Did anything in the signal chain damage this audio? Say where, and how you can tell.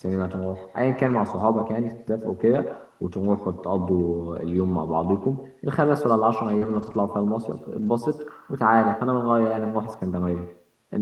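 Yes. The damage sits in call processing on the far end, and in the network.

There is echo with no canceller throughout. Every phrase is followed by a fainter, thinner copy. That copy sits about 12 dB below the direct sound and trails it by about a tenth of a second. The far end is playing the call through a loudspeaker, and its microphone is picking that playback up. Nothing in the chain subtracts it, so it returns after the network round trip.

Four stretches are lost packets rebuilt from error correction. They fall at 1.05 to 1.15 s, 2.53 to 2.55 s, 6.61 to 6.96 s and 7.78 to 7.88 s. None of them leaves a gap. Instead each turns grainier and noisier for 60 ms, 20 ms, 180 ms and 60 ms respectively. The first, second and last lengths fit runs of 20 ms packets. Each missing packet was replaced by the low-bitrate copy carried in the next one.

There is also a short concealed packet loss from 6.57 to 6.67 s, overlapping the start of the longest rebuilt stretch. 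About 40 ms of audio never arrived in time. The receiver extended the preceding sound for 38 ms and then blended back into the real signal. You hear it as a brief smear. The concealment added a little time as well, so the sound after it lands slightly late.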